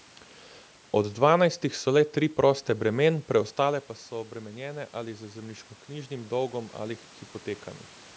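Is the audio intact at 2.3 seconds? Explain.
Yes, the speech at 2.3 seconds is intact, with no technical fault at that moment.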